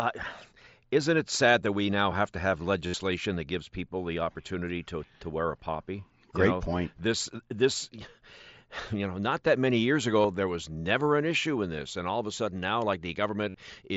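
Speech carried over a wideband mSBC headset link, band-limited at 8 kHz, shows concealed Bluetooth headset packet loss at 2.87–2.94 s between "now have to have" and "that gives people the", at 10.22–10.24 s after "not that many years", and at 13.49–13.54 s. Lost packets were filled by repeating a recent stretch of waveform, so each gap sounds briefly buzzy. The waveform shows identical cycles held at full level, and the spectrogram shows flat harmonic stripes.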